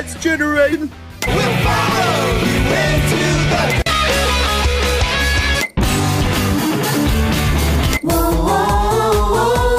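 Compressed frames skipped at 0.72 s, 5.54 to 5.56 s and 8.32 to 8.34 s: each time, a run of compressed frames was never decoded, either lost from the file or rejected as corrupt, so playback lurches forward. About a third of a second of audio vanishes at the first and last points and around 150 ms at the middle one.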